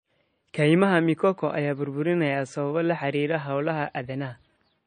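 Across the whole speech recording the top end is missing: nothing sounds above about 9.1 kHz, so sibilants and breath noise are dulled, with the smeared, watery texture of a heavily squeezed MP3. The likely cause is low-bitrate audio saved at a high bitrate. The sound fits a first MP3 pass at roughly 32 kbit/s later re-encoded near 256 kbit/s. That larger second file keeps the earlier cut-off and artefacts and cannot restore what was discarded.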